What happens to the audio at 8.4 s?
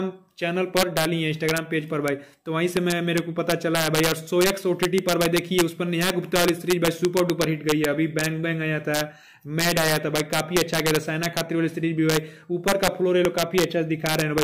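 At 8.4 s, as across the whole clip, loud peaks break into violent cracks, harsher than ordinary clipping. This is integer overflow: about 6 dB of excess gain pushes a small fraction of samples past the integer limit, and instead of being held there they wrap to the opposite extreme.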